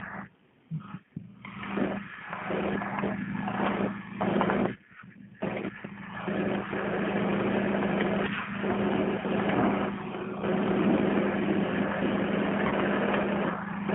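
From start to end, the speech carries G.729 codec damage. The band runs from 150 Hz to 3.4 kHz. The voice sounds rough and synthetic, which fits an 8 kbit/s stream.

At 12.68 to 12.73 s, VoIP packet loss is concealed by the speech codec. About 30 ms went missing, likely a single packet. The decoder stretches the last sound into a brief fading buzzy tone or coloured noise.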